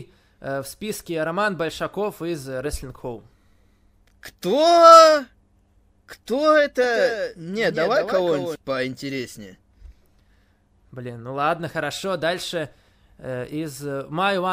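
From 6.84 to 8.56 s the speech is joined by a second, full-band copy trailing about a fifth of a second behind and roughly 5 dB quieter, with no reverberant tail, switching on and off abruptly. This doubled audio track likely comes from a slower second capture path mixed in.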